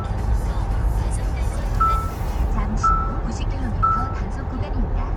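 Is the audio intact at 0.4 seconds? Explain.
Yes, the audio is intact at 0.4 seconds, with no dropout, click, distortion or other fault at that moment.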